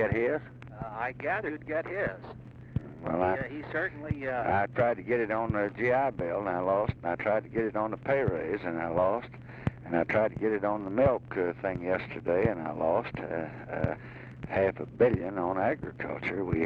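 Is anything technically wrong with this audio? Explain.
Yes. Compressed frames skipped at 1.44, 3.30 and 13.94 s: whole 46.4 ms frames were missing or rejected by the decoder, so the audio jumps ahead about 150, 50 and 100 ms. Each join is heard as a brief blip or click.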